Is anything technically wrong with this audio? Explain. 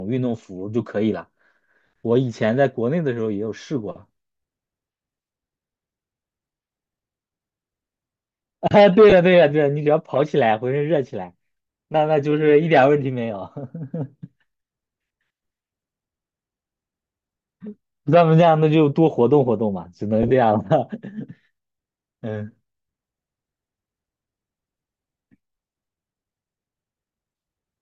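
Yes. The speech has two short dropouts where lost LE Audio frames were concealed by the decoder.

At 9.10 to 9.13 s, about 20 ms of audio went missing, which fits two 10 ms LC3 frames. At 20.23 to 20.31 s, about 40 ms was lost in pieces spread over 80 ms, the longest gap around 30 ms. In each gap the decoder rebuilt the missing frames by reusing the last good spectrum with randomised phase signs. The voiced, tonal parts of the speech therefore blur into a brief, noisy smear instead of going silent.

The light breathy graininess of the codec at 64 kbps is likely the LC3 compression, working as it should.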